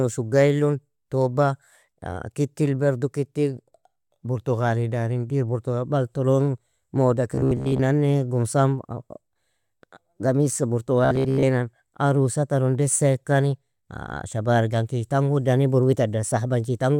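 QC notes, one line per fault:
7.35–7.80 s and 11.05–11.44 s: robotic sound from repeated short buffers. Metallic 66.8 Hz buzz, likely a 15 ms chunk replayed over most audio; spectrogram shows evenly spaced harmonic lines, waveform identical repeating cycles.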